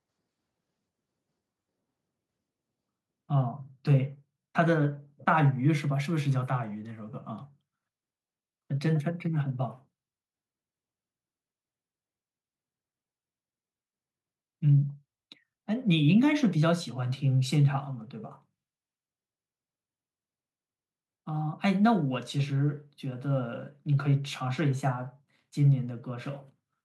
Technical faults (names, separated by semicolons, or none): none